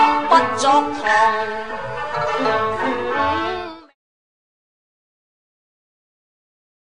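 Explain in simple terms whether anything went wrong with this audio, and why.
No, nothing went wrong here.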